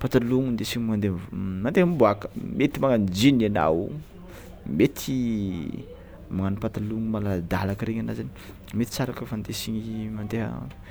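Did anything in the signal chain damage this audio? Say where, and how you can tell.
No, nothing in the signal chain audibly damaged this audio.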